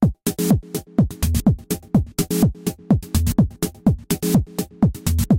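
Nothing stood out on listening to this recording of sounds.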